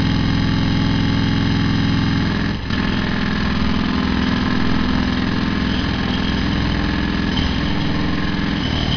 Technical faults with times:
none

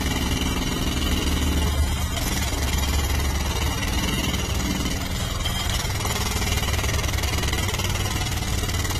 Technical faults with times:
0.00-9.00 transcoding between lossy codecs

